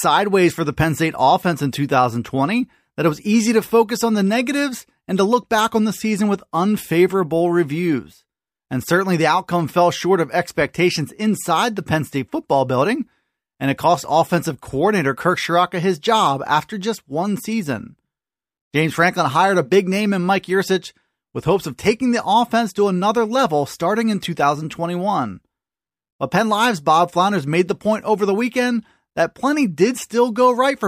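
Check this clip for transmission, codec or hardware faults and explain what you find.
Nothing stood out on listening to this speech recording.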